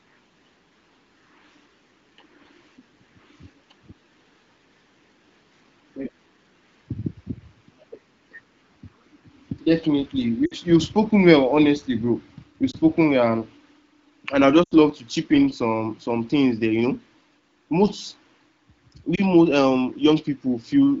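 Lost AMR speech frames occur at 10.45–10.54 s, 12.71–12.77 s before "well and", 14.63–14.76 s between "and I" and "love to chip in", and 19.15–19.20 s before "most um". Each time, the decoder stretches the last good frame with fading gain, so the single lost frames dip or warble, and the longer runs drop to near silence. On a spectrogram, the harmonics flatten into frozen, dimming bands, and the waveform's envelope sags.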